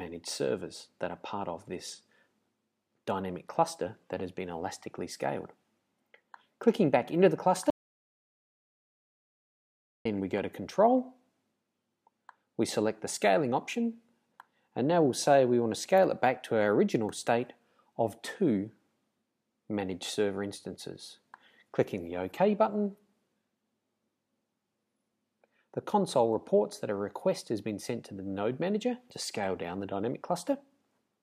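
At 7.70 s the sound stops abruptly and the track falls to silence, with no room tone or noise floor underneath, until it resumes mid-flow at 10.05 s. This is an audio dropout to silence lasting about 2.35 s. The likely cause is a lost input, such as a disconnected device, a failed link or an accidental mute, while the recorder kept writing silence. Whatever occurred during that gap is simply missing.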